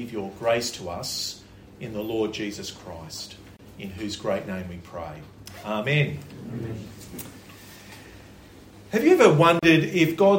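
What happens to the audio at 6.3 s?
Nothing goes wrong at 6.3 s; the audio plays through that moment intact, with no dropout, click or distortion.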